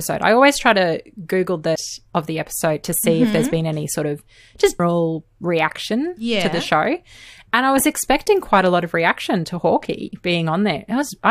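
At 1.74 s, just before "of the episode to", and at 4.79 s, between "any sort of just" and "reaction yeah to the", damaged data in the compressed stream makes the decoder lose frame sync, producing brief blips.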